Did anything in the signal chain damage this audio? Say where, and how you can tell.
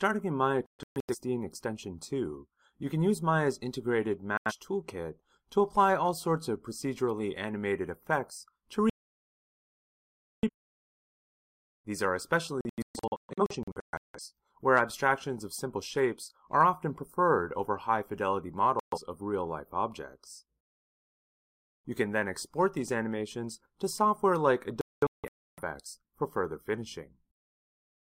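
Yes. A digital broadcast dropout in the reception stage, where the receiver lost valid frames and muted, cut the sound to silence at 0.66–1.16, 4.37–4.52, 8.90–10.49, 12.61–14.20, 18.80–18.98 and 24.81–25.62 s. Several of these are clusters of short holes; the longest is a solid gap of about 1.5 s. The material is simply missing.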